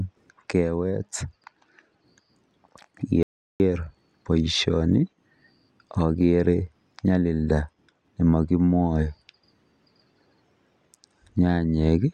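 At 3.23 s the input likely dropped and silence was written, an audio dropout to silence: the speech cuts off into dead, toneless quiet until 3.60 s, losing 370 ms.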